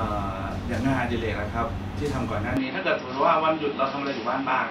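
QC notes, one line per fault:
2.57 s to end: input switched to a poorer device, likely. The speech turns dull and narrower with no gap and about the same level. Nothing remains above 5.7 kHz, and a faint new noise floor appears around 45 dB below the speech.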